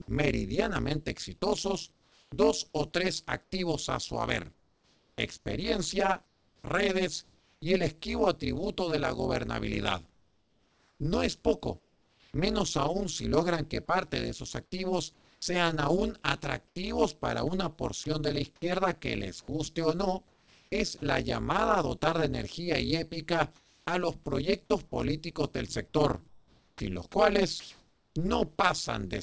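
Through the whole clip there is overlap-add ripple. The frames were rejoined with an overlap that does not sum to a steady gain. The level swings by about 60 dB at a rate around 150 Hz. It sounds like a metallic buzz on every syllable.

From 0.02 to 0.08 s, sound is dropped by the voice detector, just before "meridianamente exitosos". About 60 ms is replaced by steady noise. The likely cause is a detector that took this opening for background and did not send it.

From 1.92 to 7.62 s and again from 10.10 to 12.34 s, comfort noise stands in for the background. Sending likely stopped in these pauses. A flat, featureless hiss replaces the room's real detail. The real background returns when the sound resumes.

From 15.14 to 21.02 s, between "parte de esos activos" and "llamada a dotar de", the sound is chopped by the voice detector. The detector likely switched on and off repeatedly. Soft syllable edges drop into synthetic noise.

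From 23.56 to 23.86 s, between "de energía y épica" and "a los proyectos políticos", comfort noise briefly fills the gap. The background here sits about 37 dB below the loud parts. The fill is about 1 dB quieter. The texture turns smooth and steady. This is likely a short transmission pause.

From 26.28 to 28.16 s, comfort noise again replaces the background. At 26.71 s the onset is clipped by the voice detector. About 90 ms of the start is likely lost to slow detection. The sound begins abruptly, without its soft attack. Across the clip nothing is heard above 8 kHz, which fits a wideband call codec such as G.722.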